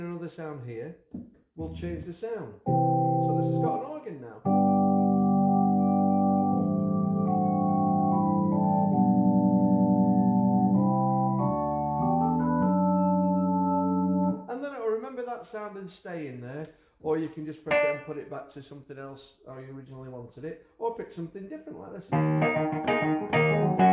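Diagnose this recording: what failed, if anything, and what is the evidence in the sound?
Nothing in this recording points to a failure at any stage of the chain. No dropout, glitch or distortion appears anywhere to diagnose.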